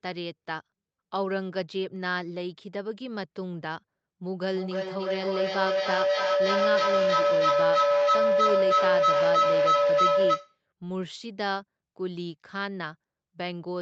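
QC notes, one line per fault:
4.5–10.6 s, feedback howl: two devices in one room are on the call together, so sound from one loudspeaker re-enters a microphone and comes back louder on each trip around the loop. The repeats grow instead of dying away. They narrow onto a tone near 500 Hz and climb to about 8 dB above the speech, pulsing roughly every 0.3 s at the loop's delay, until the howl stops at 10.6 s.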